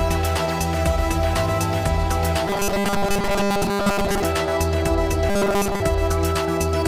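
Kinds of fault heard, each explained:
Robotic sound from repeated short buffers: from 2.48 to 4.24 s and again from 5.29 to 5.80 s the sound becomes a rigid metallic buzz fixed at 200 Hz, likely because late audio was covered by looping a 5 ms segment that displaced most of the real signal.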